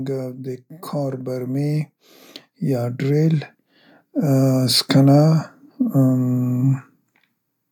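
From 0.68 to 2.0 s, then 2.58 to 3.52 s, the speech and background swell together by about 6 dB, then about 4 dB: automatic gain rising, boosting a quiet input.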